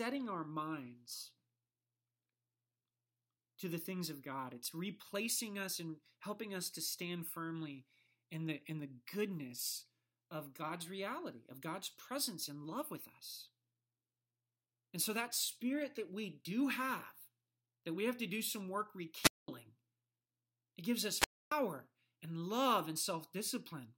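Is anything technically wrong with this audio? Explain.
Yes. The speech has two wireless microphone squelch dropouts, at 19.21 to 19.48 s and 21.16 to 21.52 s. The analogue FM link fades until the receiver's squelch shuts the output, leaving holes of near silence about 213 ms and 277 ms long. A short surge of hiss or static just before each mute marks it as a radio-signal fade, unlike a digital packet loss, which cuts out cleanly or leaves glitchy fragments.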